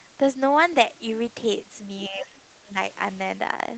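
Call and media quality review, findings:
Speech suppressed in double talk, 2.09–2.42 s and 2.63–2.77 s: echo canceller likely treated near-end speech as echo during overlap. Level drops by up to about 20 dB, then about 15 dB.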